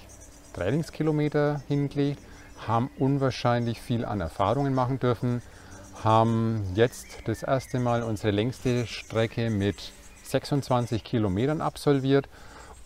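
A brief chirp-like blip breaks into the audio from 5.51 to 5.53 s, a fairly quiet burst of misplaced energy lasting about the span of a single compressed frame. It is a corrupt frame decoded: bits inside one frame were damaged, yet the decoder played it anyway, so misread gains and codes put energy at the wrong frequencies for that frame's duration and produced the short squeak.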